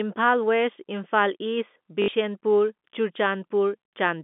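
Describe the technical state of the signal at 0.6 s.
At 0.6 s the speech is intact, carried over an ordinary telephone line whose G.711 coding limits it to the narrow band of roughly 200 Hz to 3.5 kHz.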